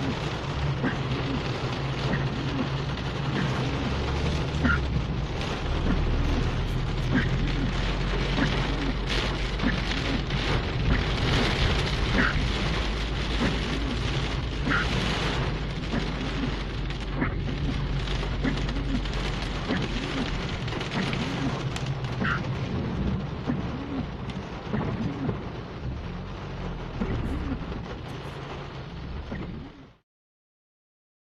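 Nothing goes wrong anywhere in this one; there are no glitches, dropouts or other technical problems to point to at any moment.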